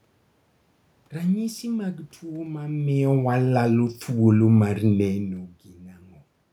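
From 2.74 s, just after "mag tuo", the speech and the room noise behind it sink together, dropping by about 5 dB over the next two and a half seconds until 5.23 s. This is automatic gain falling: the gain control judged the input too loud or its background noise too strong and eased its gain down step by step. The background follows the voice down, which sets it apart from the talker moving around 2.5 s and 5 s.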